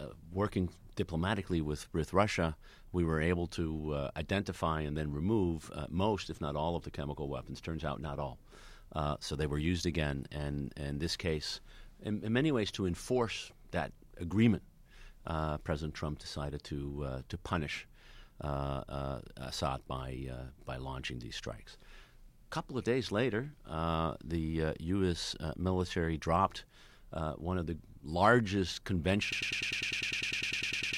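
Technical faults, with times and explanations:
29.32 s to the end, broken-record loop: playback or the stream likely stalled and kept resending its last fragment, so a 0.1 s slice of speech repeats exactly, back to back, about 16 times. This produces a rapid stutter, and the speech that should have followed is lost.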